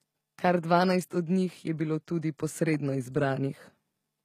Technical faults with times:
0.00-4.25 HE-AAC compression

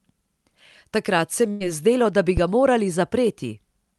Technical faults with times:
1.51-1.63 burst of packet loss
2.37-2.61 phantom power thump

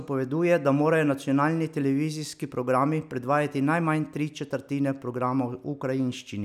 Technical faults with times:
none

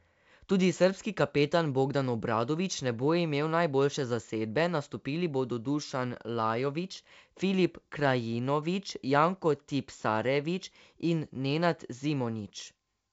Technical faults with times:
none

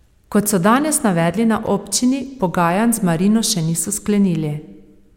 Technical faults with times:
1.66 gap between stream segments

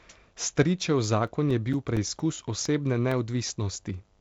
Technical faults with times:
0.58-3.11 CD scratch ticks

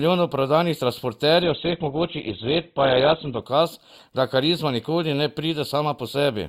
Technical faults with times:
1.42-3.42 adaptive stream at a lower bitrate

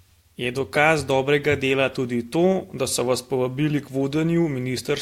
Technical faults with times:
none

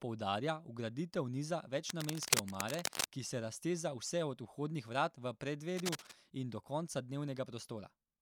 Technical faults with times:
1.89-3.04 cable scratch noise
5.77-6.13 cable scratch noise

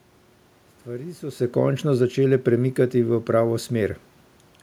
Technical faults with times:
none

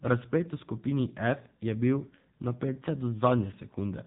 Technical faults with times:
0.00-4.06 AMR narrowband mobile codec

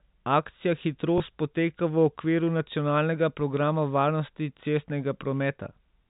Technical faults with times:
1.18-1.20 packet loss with last packet repeated

